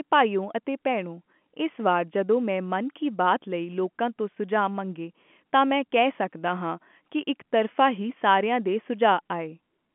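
Nothing is technically wrong with this speech clip; it is telephone-band audio with no faults to report.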